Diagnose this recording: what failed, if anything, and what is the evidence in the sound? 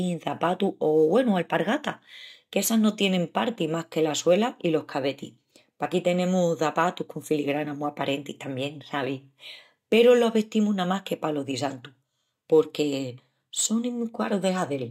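Converter: sample clock jitter throughout. An unsteady clock mistimes samples. A hiss about 35 dB down rises on loud, bright passages and vanishes in pauses.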